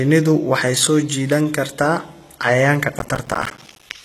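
From the start, the speech carries heavy HE-AAC compression as its likely cause. Nothing sits above 12.4 kHz. The treble is rebuilt from copied lower bands rather than coded directly, so s sounds turn gritty and metallic. The damage fits a low bitrate near 16 kbps.

From 2.99 to 3.92 s, processor overload crackle tears through the speech. Buffers of roughly 5 ms miss their deadlines repeatedly, dozens of them. Each miss drops a short hard-edged silence, and together they form a dense, gritty crackle.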